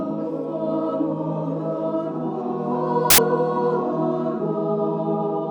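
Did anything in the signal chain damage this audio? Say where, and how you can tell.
Yes, a sample-format conversion fault. From 3.10 to 3.18 s, samples built from the wrong bytes give loud, harsh broadband noise. Misassembled bytes push fast-changing low bits into the high ones.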